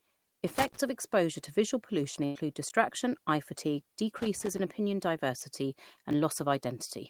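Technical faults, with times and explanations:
0.48–0.77 s, loose connector crackle: an irregular scratchy burst just before "of exposure to visual", from a worn contact making and breaking the signal.
2.25–2.37 s, burst of packet loss: after "exposure to visual pollution" the sound holds and fades for about 100 ms, then resumes with that stretch gone.
2.69–2.71 s, chunks out of order: a jumbled flicker where a 10 ms chunk plays one chunk late, leaving hard joins.
4.17–4.59 s, loose connector crackle: rough crackling right after "eye fatigue", as an unstable contact chops the line on and off.
5.39–5.43 s, short concealed packet loss: a brief smear where 20 ms never arrived and was filled by extending the preceding sound, then blended back.
6.11–6.14 s, chunks out of order: another garbled moment, a 10 ms chunk arriving two chunks late and playing after audio meant to follow it.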